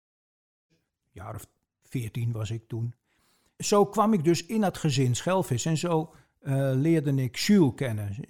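There are no technical faults to describe in time order here; the speech simply fades in smoothly from about 0.5 s, reaching full level at 0.74 s.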